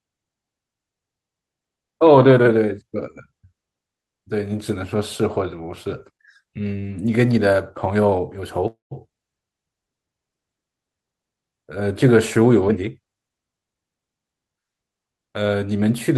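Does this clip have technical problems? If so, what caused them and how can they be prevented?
Yes. Call audio freeze at 8.67–8.93 s: the sound smears into a fading buzz, then goes silent, likely delayed packets emptying the jitter buffer. A more stable network path prevents it.

Jitter buffer speed-up at 12.68–14.05 s: the speech runs about 17% fast at unchanged pitch as a backlog is trimmed. Smaller, gentler buffer adjustments would avoid it.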